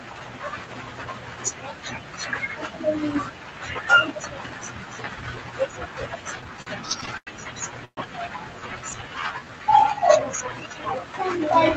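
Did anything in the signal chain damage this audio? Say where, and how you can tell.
Yes. The damage is in the network and jitter-buffer stage of a call path, in three related ways.

Repeated stalls (stutter) run from 6.41 to 7.29 s. The audio hitches nine times, with the longest hold about 90 ms and roughly 193 ms of filled-in sound, about a fifth of that stretch. Packets kept arriving behind the playout clock, so the buffer emptied repeatedly and the receiver stretched the last sound each time. It differs from a single freeze in the rapid run of short catches.

A call audio freeze follows at 7.85 to 7.99 s. The sound hangs for about 123 ms, fading into about 80 ms of silence before resuming exactly where it stopped. Nothing is cut out. A gap is inserted, which separates it from a dropout or packet loss that skips material. The likely cause is a packet delay that drained the buffer and raised its playout delay by about 123 ms.

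A jitter buffer slow-down spans 8.60 to 10.97 s. The audio plays at about 86% speed and stretches that section by about 332 ms, yet its pitch stays put. That rules out a clock or tape-speed error, which would lower the pitch too. The receiver repeated single pitch periods and pause fragments to rebuild its reserve.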